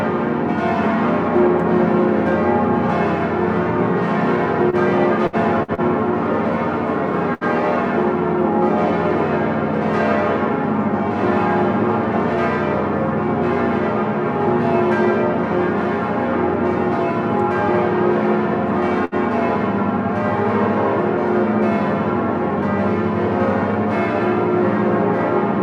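The audio has two network-style problems. There are four short stalls from a late packet, at 4.70, 5.63, 5.74 and 19.05 s: the jitter buffer ran dry, so the last sound gets held for 28, 54, 36 and 69 ms before carrying on from the same spot, with nothing actually lost. Then there are two bursts of packet loss, at 5.27 and 7.34 s. The receiver stretched and faded the last sound over gaps of 61 and 70 ms, and about 60 ms of audio is skipped each time when it picks back up.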